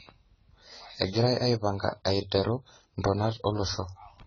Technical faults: AAC compression

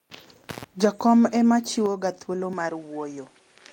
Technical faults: intermittent contact; microphone volume stepped down; input switched to a poorer device

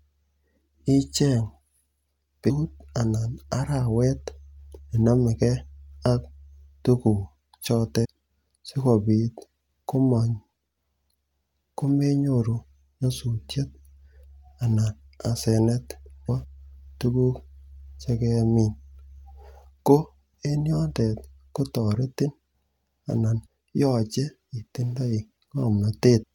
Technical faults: compressed frames skipped

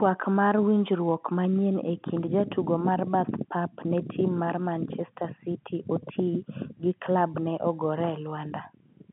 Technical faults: none

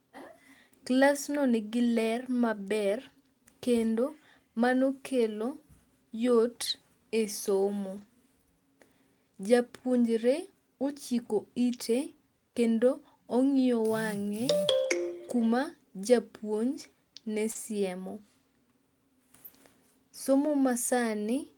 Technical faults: lost packet rebuilt from error correction; short concealed packet loss

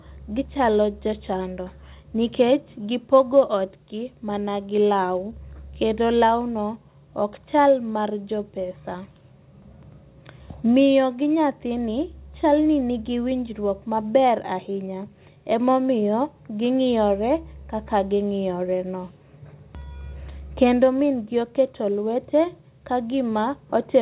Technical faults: none

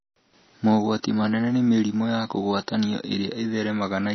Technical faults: MP3 compression

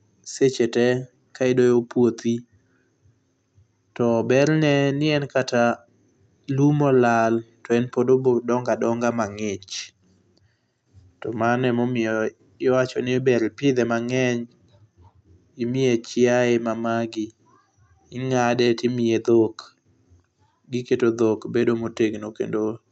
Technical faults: none

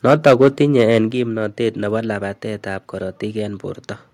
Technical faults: microphone overload; microphone volume stepped down

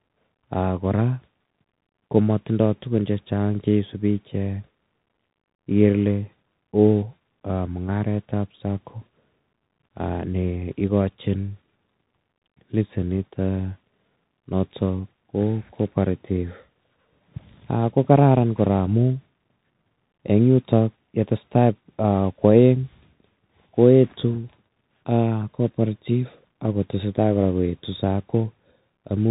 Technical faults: Bluetooth CVSD headset codec

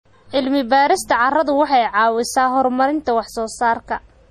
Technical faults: MP3 compression

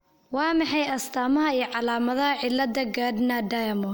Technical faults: pre-emphasis left on

